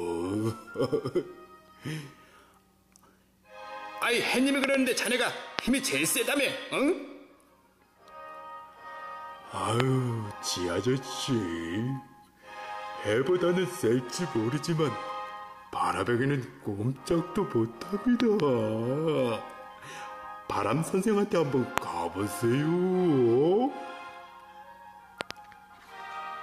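Loud pops strike at 4.64 to 4.76 s (a double), 5.59 s, 9.80 s, 18.20 to 18.42 s (a double), 21.78 s, and 25.21 to 25.33 s (a double). Each is a sharp thump standing roughly 20 to 25 dB above the sound, which continues underneath. The likely cause is a voltage step or pulse, from a plug, switch, static or driver glitch, added to the signal. A waveform shows tall isolated spikes, and a spectrogram shows thin full-height vertical stripes.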